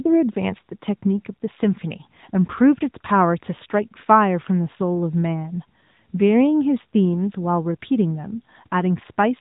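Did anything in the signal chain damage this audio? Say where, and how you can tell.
Yes, codec stage: AMR narrowband mobile codec throughout, cutting everything above 3.8 kHz. Its pulse-driven vocal-tract model leaves the speech audibly buzzy, fitting roughly 10 kbps.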